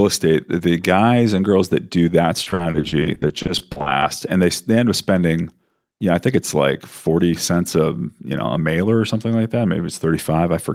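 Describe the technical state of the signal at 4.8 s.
At 4.8 s the signal is intact, with no fault audible at that moment.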